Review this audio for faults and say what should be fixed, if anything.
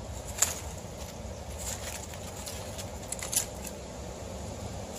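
At 3.42 s there is a brief blip from damaged data in the compressed stream: the decoder misreads corrupted frames, loses sync, then recovers at the next frame header. To prevent it, verify file integrity with checksums and re-fetch or re-encode from a clean source.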